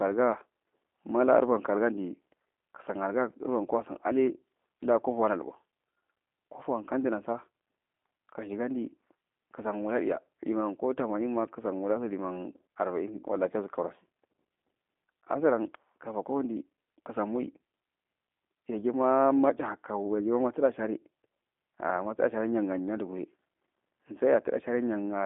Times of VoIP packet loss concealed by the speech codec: none

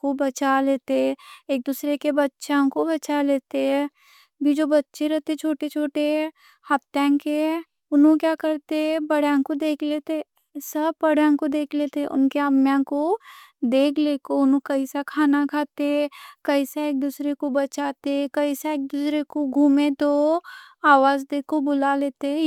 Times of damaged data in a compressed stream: none

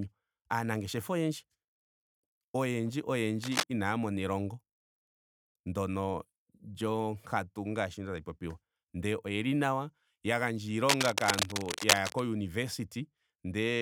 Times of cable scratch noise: 3.43-3.64, 10.87-12.20

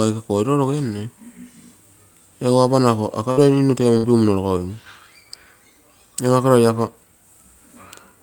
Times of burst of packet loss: 3.31-3.40, 3.97-4.06

